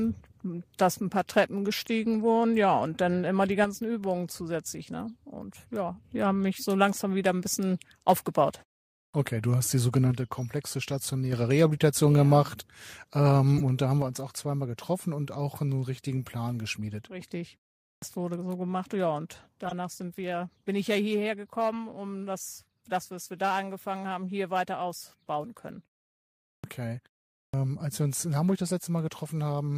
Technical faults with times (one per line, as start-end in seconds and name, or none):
3.64-6.04 one channel drops out
9.04-9.14 clipped start after a pause
10.12-11.32 one channel drops out
13.57-13.61 corrupt frame decoded
14.02-29.77 one channel drops out
17.93-18.02 clipped start after a pause
19.65-19.72 corrupt frame decoded
26.55-26.64 clipped start after a pause
27.45-27.54 clipped start after a pause